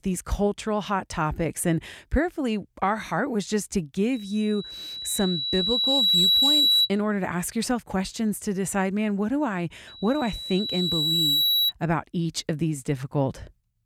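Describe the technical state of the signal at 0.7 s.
At 0.7 s the speech signal is intact, with no audible technical fault at that point.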